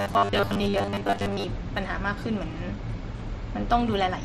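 From 0.01 s to 1.44 s the speech collapses into a rigid, metallic drone at 100 Hz that only loosely tracks the words: robotic sound from repeated short buffers. The likely cause is audio arriving too seldom, so a segment of about 10 ms is replayed to cover most of the gap while the real signal is skipped. On a spectrogram this shows as flat, evenly spaced harmonics of 100 Hz; the waveform shows near-identical 10 ms cycles.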